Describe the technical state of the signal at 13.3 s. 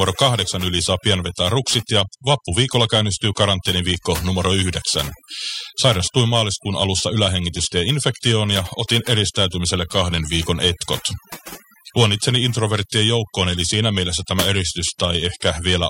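At 13.3 s a steady, fixed-pitch whine sits under the speech, built on 1 kHz with its strongest component at 7 kHz, roughly 20 dB below the signal. This is USB whine, present for the whole clip. The USB bus pulls current in 1 ms frames, and that 1 kHz rhythm leaks into the audio through the power or ground wiring, appearing as a tone and its harmonics rather than as broadband hiss.

The same moment also shows overdone noise removal, which runs throughout as well. The background between sounds collapses to near silence scattered with small twinkling specks. A noise reducer set too aggressively is switching individual frequency bands down or off wherever they come close to its noise estimate, so the quieter detail of the speech gets removed along with the noise.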